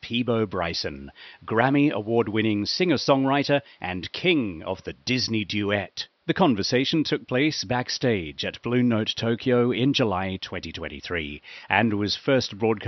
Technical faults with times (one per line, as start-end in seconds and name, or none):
none